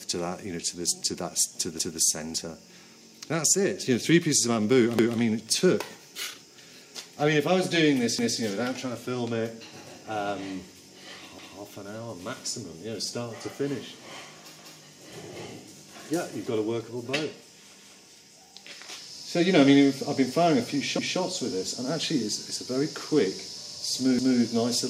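At 1.79, 4.99, 8.19, 11.39, 17.79, 20.99 and 24.19 s, overlapping chunks cause a stutter: each 3-second chunk begins 200 ms before the previous one ended, so that 200 ms of sound plays twice. On a waveform, a 200 ms stretch is visibly duplicated at each join, with an abrupt discontinuity at the splice. On a spectrogram, each join shows the preceding pattern repeated immediately after it.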